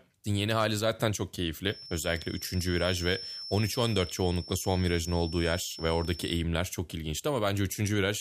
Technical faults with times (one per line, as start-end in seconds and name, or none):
1.64-6.47 feedback whistle